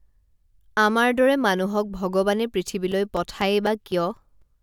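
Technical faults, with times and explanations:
2.92 to 4.42 s, periodic USB or driver dropouts. About seven short gaps fall every 0.25 s across this stretch of speech. Each gap lasts only a few milliseconds and is filled with silence. The audio cuts out briefly and comes back, so each gap is heard as a small tick or pop. The regular spacing points to a background task stalling the USB bus or audio driver at a fixed interval.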